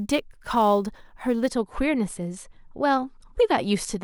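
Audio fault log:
0.0 to 1.5 s, sample clock jitter: a fine hiss and grainy roughness rides on the speech, thickening on louder passages and on bright, sibilant sounds, then dropping away in the pauses. The converter's clock was wandering by a few microseconds, so each sample was taken slightly early or late. Where the waveform changes fast, that timing slip becomes a sizeable amplitude error, leaving a noise floor roughly 30 dB under the signal that follows its level.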